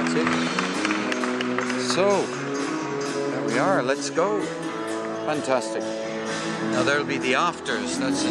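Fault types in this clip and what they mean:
Nothing stood out as a technical problem on listening.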